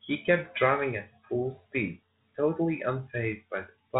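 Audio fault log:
No faults heard in this speech recording.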